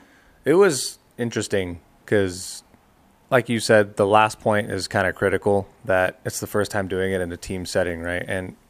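Nothing goes wrong anywhere in this stretch of speech, so there's no technical fault to point to at any moment.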